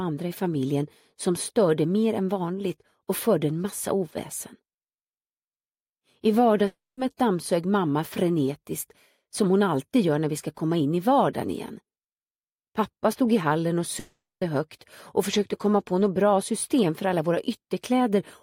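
At 6.67 to 6.99 s and again at 13.99 to 14.43 s, the sound suddenly smears into a buzzy, fading continuation of itself, sinks to about 0.2 s of near silence, then resumes with roughly 0.3 s and 0.42 s of material gone. This is likely a long network dropout. Unlike a brief packet-loss click or warble, the concealment visibly gives up before audio returns, and nothing of the lost stretch is ever heard.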